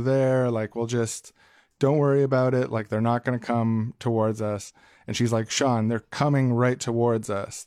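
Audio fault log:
4.60–4.71 s, compressed frames skipped: just after "going to come towards", the decoder dropped whole frames, missing or rejected as damaged, so the speech leaps forward by about 50 ms.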